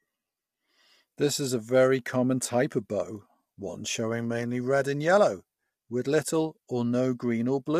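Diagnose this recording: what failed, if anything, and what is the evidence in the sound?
The codec stage failed. Throughout the speech the voice sounds rough and grainy, with noise filling the gaps between pitch harmonics and a dull or synthetic-sounding top band. This is likely low-delay AAC compression (AAC-ELD), whose short frames resolve harmonics poorly at a low bitrate, consistent with about 32 kbps.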